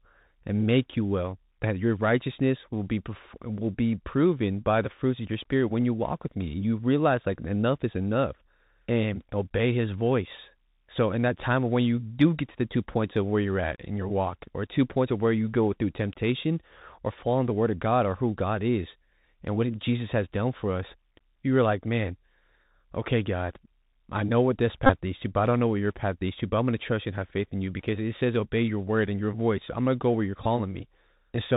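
Throughout the speech, the link runs through the Bluetooth CVSD headset codec, a one-bit delta scheme that only signals whether each sample steps up or down. That fits a 64 kbit/s stream. Because everything is squeezed into a narrow band, nothing above 4 kHz survives, and the adaptive step cannot keep up with loud, sharp sounds. The result is plainly audible: s sounds turn scratchy, peaks crunch, and a fine granular hiss sits beneath the speech.

From 24.86 to 24.92 s, the headset link dropped about 30 ms of audio and the chip replayed the last good packet's bits over and over. That is a Bluetooth headset packet repeated in a run, which fits roughly eight lost packets. The repeats come every 3.75 ms, and that regular spacing turns the gap into a brief buzz near 267 Hz. Shorter losses follow at 27.29 to 27.31 s (7.5 ms) and 30.44 to 30.46 s (18.8 ms), each giving a shorter buzz or tick.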